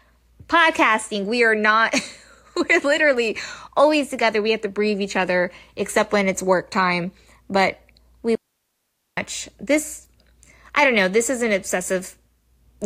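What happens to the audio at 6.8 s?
Nothing goes wrong at 6.8 s; the speech runs through that moment intact, with no dropout, click or distortion.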